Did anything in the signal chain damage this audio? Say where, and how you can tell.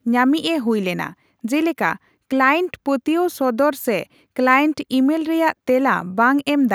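No, nothing in the signal chain damaged this audio.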